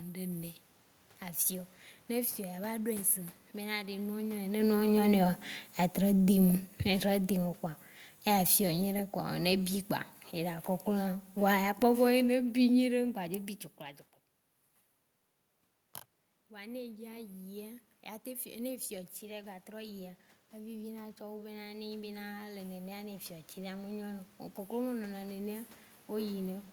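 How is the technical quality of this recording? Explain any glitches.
The recording has two automatic gain faults, one in each direction, so the level drifts noticeably over its length.

From 4.48 to 13.15 s there is automatic gain falling. The gain control judged the input too loud, just after the talker moved at about 4.5 s, and pulled its gain down by about 12 dB over nearly nine seconds. The voice starts loud and then sinks steadily, with the room noise behind it dropping in step, which shows the change is in the gain stage.

From 16.48 to 26.67 s there is automatic gain rising. After the talker moved away at about 13.5 s, the input fell by about 16 dB, and the gain control slowly raised its gain by about 11 dB to compensate. The voice and the room noise swell together over roughly ten seconds, and the voice still ends somewhat quieter than before the talker moved.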